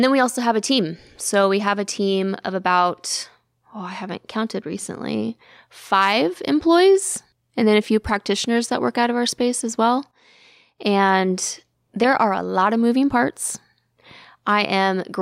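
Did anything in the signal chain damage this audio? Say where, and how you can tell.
No, nothing in the signal chain damaged this audio, and there is nothing to point to at any stage.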